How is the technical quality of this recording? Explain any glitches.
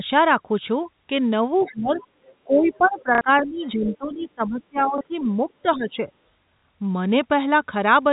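The speech has three audible faults: dips during double talk, faint scraps of a second voice, and a short robotic stutter and small blips from lost packets.

Speech suppressed in double talk runs from 1.5 to 2.01 s and again from 2.44 to 6.08 s. The level falls by up to about 15 dB, over roughly half a second and then roughly three seconds. The likely cause is an echo canceller that could not separate this talker from loudspeaker echo of the other side. It treated both as echo and turned everything down. The voice sinks while both sides talk.

The other side's voice leaks through in scraps at 1.59 to 1.7 s, 1.94 to 2.07 s, 2.26 to 2.35 s, 2.65 to 3.03 s, 3.46 to 3.68 s, and 3.85 to 3.97 s. Most sit about 25 to 35 dB under the main speech. The one near 3.9 s is louder, about 15 dB down. This is likely residual echo the canceller failed to remove. It plays on the loudspeaker, reaches the microphone, and survives as fragments.

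Packet loss with the last packet repeated occurs at 3.15 s for 60 ms, and at 4.98 s and 6.6 s for 30 ms each. The receiver filled each gap by replaying the previous packet. The loop does not align with the pitch, so a join can click. The 60 ms gap fits two 30 ms packets, so it buzzes at about 33 Hz as a brief mechanical stutter. The telephone coding caps everything at 4 kHz, which gives all of this a narrow, phone-like band.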